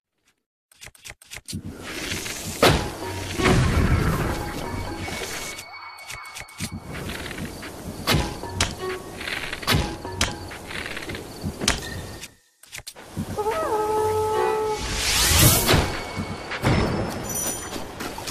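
Damaged data in a compressed stream appears at 7.02 to 7.06 s as a brief glitch in the sound. Corrupted bytes there leave the decoder misreading those frames and losing sync until it locks onto the next valid frame header.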